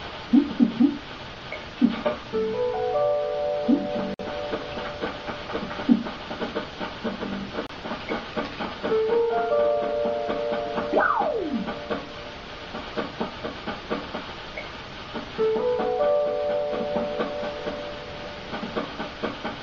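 At 4.14 s a gap at a join of encoded pieces opens in the continuous sound, lasting about 52 ms to 4.19 s. A second, shorter one follows at 7.67 s, about 27 ms to 7.69 s. The audio was encoded in separate pieces and joined without trimming, so each encoder's start-up delay and last-frame padding remain as silence. Codec smearing softens the gap edges, and the sound resumes from where it stopped.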